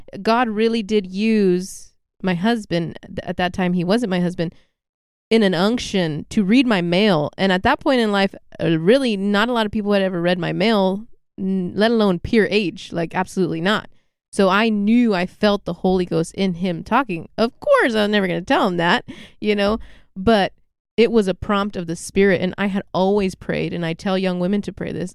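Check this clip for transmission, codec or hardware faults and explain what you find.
Nothing faulty can be heard anywhere in this recording.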